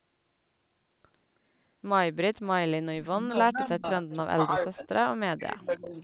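From 2.89 to 3.85 s, 4.06 to 4.92 s and 5.23 to 5.96 s, the speech dips by up to about 30, 35 and 40 dB. This is speech suppressed in double talk, likely because the echo canceller attenuated the talker while the far side spoke. At 4.1 s, a faint copy about 318 ms late, roughly 25 dB down, sits under the speech. This is an echo leak, likely loudspeaker pickup that the far end's canceller missed. Throughout, the audio stops at 4 kHz, which fits a G.711 call path.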